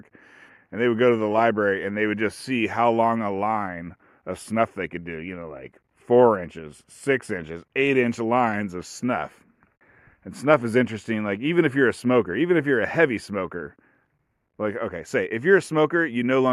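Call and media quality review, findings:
No audible faults found in this speech recording; nothing to attribute to capture, transport or playback.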